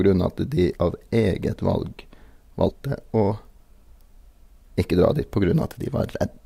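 At 0.72 s, 2.68 to 2.73 s and 5.80 s, compressed frames are skipped. The speech jumps ahead by roughly 70, 100 and 30 ms, consistent with dropped 10 ms frames.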